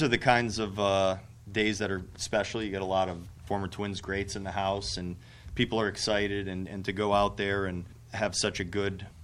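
Nothing stood out as a technical problem on listening.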